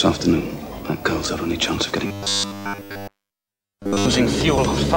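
Audio is likely arriving too seldom between 2.03 and 4.07 s, so the playback side fills the gaps by looping a roughly 10 ms slice, which fits the steady 100 Hz buzz. Throughout that stretch, robotic sound from repeated short buffers replaces nearly everything with a rigid, metallic drone.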